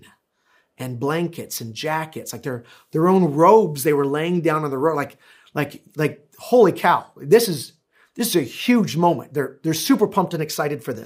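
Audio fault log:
No audible faults anywhere in this speech recording.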